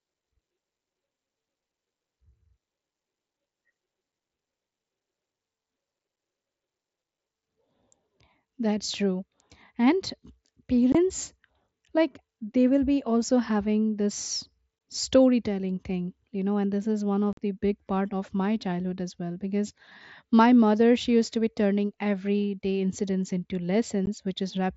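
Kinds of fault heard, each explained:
Unconcealed Bluetooth headset packet loss: voice packets dropped between headset and phone are replaced by silence or an idle pattern, leaving four abrupt holes of 15 to 53 ms in the speech.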